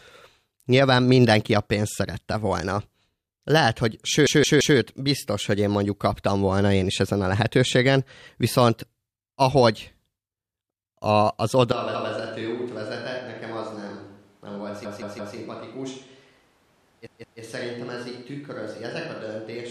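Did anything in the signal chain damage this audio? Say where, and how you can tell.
Yes. The driver or buffer stage produced a repeated buffer three times. A 0.17 s slice of speech plays again back to back with hard joins: at 4.27 to 4.78 s (three extra plays, ending just before "biztos hogy én mondjuk"), at 14.85 to 15.36 s (three extra), and at 17.07 to 17.41 s (two extra). The block length fits an 8192-sample buffer that was replayed when fresh data was late. On a waveform, identical blocks tile side by side with step discontinuities at each seam. On a spectrogram, the same pattern copies across with vertical click lines.

From 11.72 s to the end, the sound abruptly turns roomy and hollow. The level drops by about 10 dB, the low end thins, and background noise rises to about 30 dB below the speech. The cause is likely a switch to a distant microphone at the capture stage after the close one dropped out. 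On a waveform, the envelope shrinks in a single step and the gaps no longer fall to silence. On a spectrogram, the bass band weakens, reverberant smearing trails each syllable, and a broadband noise floor fills the background.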